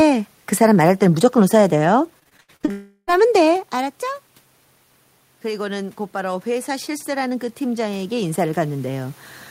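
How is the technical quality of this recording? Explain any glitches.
The recording has three clear technical problems, two network faults close together early on and a slow level change near the end.

From 2.19 to 2.69 s there is repeated packet loss, heard as robotic sound. Audio packets went missing about eight times in half a second, the longest hole around 79 ms. Each time, the receiver covered the gap by extending the last bit of sound before the next gap arrived, so nearly half of that stretch is patched. The result is choppy audio with fragments missing.

From 2.71 to 3.09 s the signal breaks off entirely in what is likely a long network dropout, with about 0.36 s of audio never delivered. The receiver keeps stretching the last sound into a fading buzz that fills almost the whole gap, leaving only a brief silence near the end. When the audio returns, that missing section is simply gone.

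From 5.42 to 9.26 s there is automatic gain rising. The incoming level fell by about 14 dB, and the gain control responded by slowly boosting its gain by about 9 dB over several seconds. Both the speech and the room noise behind it swell together, a gradual lift in loudness rather than a sudden step. The talker's distance from the microphone also shifts around 3.5 s, which is ordinary movement and not a system fault.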